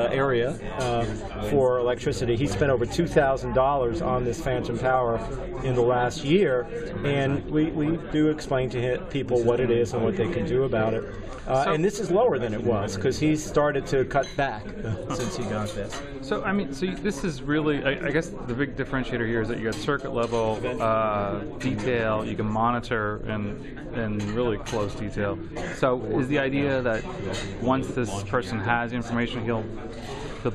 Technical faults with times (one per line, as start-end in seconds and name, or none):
none